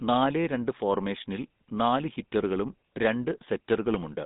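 From start to finish, the speech carries GSM full-rate codec damage: the band runs from about 150 Hz to 3.7 kHz, and the voice has a plainly audible buzzy, gravelly texture. That roughness comes from pulse-driven vocal-tract modelling, which fits the 13 kbps full-rate coder.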